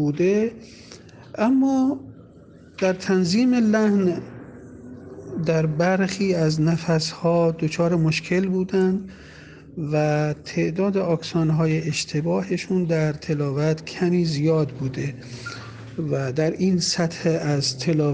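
Nothing in the audio gives a listener anything to flag as a technical fault, so there's nothing to walk through here.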